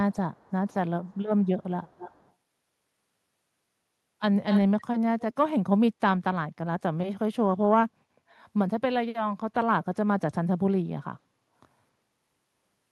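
A far-end echo canceller likely let loudspeaker pickup through, causing echo leak: faint delayed copies of the speech at 0.12–0.16, 0.33–0.74, 1.05–1.22 and 1.44–1.48 s (346 ms late, about 35 dB down), then louder at 1.86–2.32, 4.5–4.62 and 5.2–5.34 s (270 ms late, about 10 to 20 dB down).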